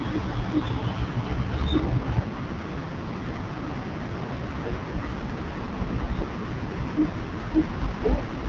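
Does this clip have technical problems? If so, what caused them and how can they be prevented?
Yes. The speech went through the AMR wideband (HD Voice) codec at what sounds like its lowest mode, around 6.6 kbit/s, so its pulse-driven vocal tract model is starved of bits. Throughout, voices sound rough and raspy, with nothing above 7.2 kHz. Prevent it by running AMR-WB at 12.65 kbit/s or higher.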